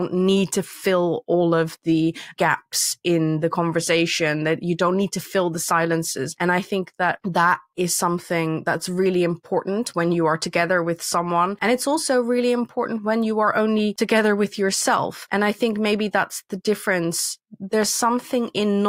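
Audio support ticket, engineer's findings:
No faults found on listening; the speech comes through without any dropouts, glitches or distortion worth flagging, so nothing to chase on this one.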